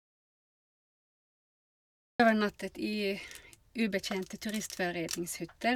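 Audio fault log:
0.0 to 2.2 s, audio dropout to silence: the input was already lost when the clip begins, most likely through a disconnected device, a failed link or a stray mute, while the recorder kept writing silence. The opening 2.2 seconds are therefore silent with no room tone at all, and the speech then arrives abruptly mid-flow rather than starting naturally. Whatever was spoken before that point is simply gone.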